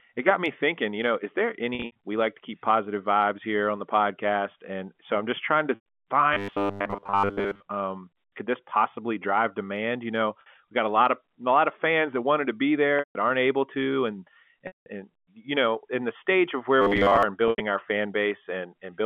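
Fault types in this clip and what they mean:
Packet loss with pitch repetition: Chunks of audio went missing, and the receiver covered each gap by looping the last pitch period before fading it down. There are six spots: 1.75, 5.75 s (right after "so I'm just trying"), 10.41, 12.99 s (between "that wanted to be" and "aren't able to"), 14.67 and 17.48 s. They range from about 50 to 190 ms lost. The short ones come across as a brief held buzz, and the longer ones sag toward silence before the audio cross-fades back in.
Robotic sound from repeated short buffers: From 6.33 to 7.64 s and again from 16.82 to 17.23 s, right after "in the stage of", the sound turns into a stiff, metallic buzz locked at 100 Hz that still loosely tracks the talking. The likely cause is fresh audio arriving too slowly, so a tiny buffer gets replayed over and over. A 100 Hz lock fits a 10 ms chunk being looped, with most of the real audio in those stretches skipped.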